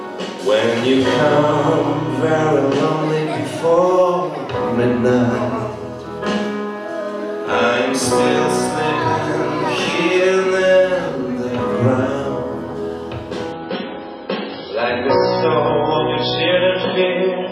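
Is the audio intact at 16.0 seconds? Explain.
No. At 16.0 seconds the clip is inside an adaptive stream at a lower bitrate, from 13.53 s to the end at 17.52 s. The connection slowed, so the player switched to a leaner version without a gap. Quality changes abruptly: codec artefacts rise, and nothing remains above 5.6 kHz. This fits a drop from 128 to 16 kbit/s MP3.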